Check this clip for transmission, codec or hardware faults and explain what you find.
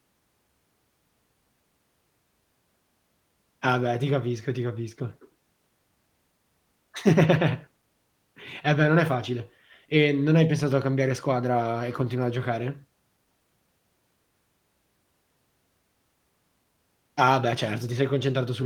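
Nothing stood out on listening to this speech recording that would point to a transmission, codec or hardware problem.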